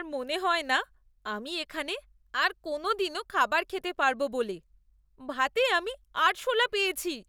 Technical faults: none

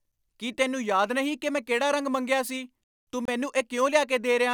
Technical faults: Bluetooth dropout

